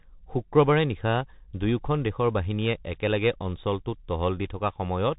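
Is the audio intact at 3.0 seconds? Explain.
No. At 3.0 seconds, as throughout the clip, the speech sounds boxed-in and narrow, with scratchy, rough s sounds, a granular hiss beneath it, and harsh distortion on louder bright passages. This is the Bluetooth CVSD headset codec. It encodes each sample as a single up-or-down bit, which fits a 64 kbps headset link, with an adapting step size. Nothing above 4 kHz survives, and fast high-frequency movement outruns the step, producing the grit.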